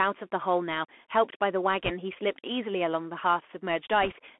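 Throughout, the speech carries a Bluetooth CVSD headset codec. The band runs from about 250 Hz to 3.4 kHz. Each sample is coded as a single up-or-down step, which fits a 64 kbit/s stream. The damage is plainly audible: loud high sounds smear, s sounds turn scratchy, and a grainy hiss sits underneath.

From 1.84 to 1.91 s, bit errors on the Bluetooth voice link add a brief rushing crackle. The error rate is roughly 2 percent. No single click stands out, because each flipped bit nudges the step only slightly. A second burst, slightly weaker at roughly 1.5 percent, crackles from 4.02 to 4.12 s.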